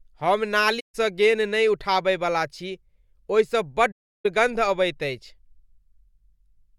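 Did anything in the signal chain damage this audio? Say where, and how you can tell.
Yes, at the codec: AAC frame loss with muting. The sound drops out from 0.79 to 0.95 s and from 3.91 to 4.26 s, holes of 150 and 340 ms. The decoder zeroed the missing spectra, and the overlapping windows taper each edge. A spectrogram shows full-band blank columns with soft borders, and the waveform fades to a flat line.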